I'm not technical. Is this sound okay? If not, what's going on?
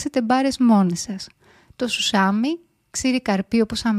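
Yes, nothing in this speech recording needs fixing.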